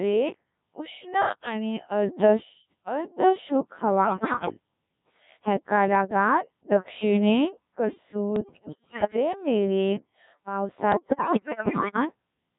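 Speech heard entirely through the Codec 2 vocoder at about 1.3 kbit/s, so the voice is rebuilt from sine waves and sounds heavily robotic and buzzy. Bit errors on digital voice radio hit at 4.04–4.54 s, 8.36–9.16 s and 10.92–11.96 s, with roughly one bit in ten to one in seven flipped. The corrupted frames cause abrupt pitch, level and timbre jumps and warbling gibberish.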